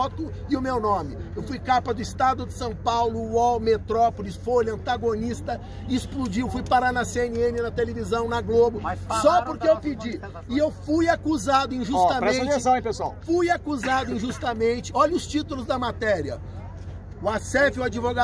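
No audible faults anywhere in the recording; nothing to flag.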